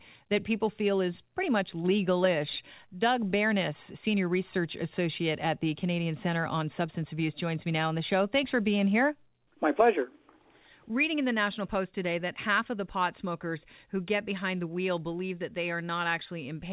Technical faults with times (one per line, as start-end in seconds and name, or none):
none